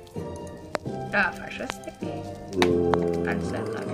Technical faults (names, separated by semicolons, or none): loud pop